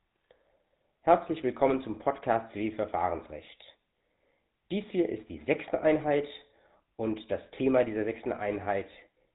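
From start to finish, the speech carries the sound of the GSM full-rate codec. The damage is plainly audible. The codec rebuilds the voice from a model of the vocal tract, fed by a sparse train of regular pulses. Much of the fine excitation detail is thrown away. Everything above 4 kHz is gone, so the top end sounds dull and boxed in. The result is a buzzy, gravelly texture that fits a 13 kbps mobile link.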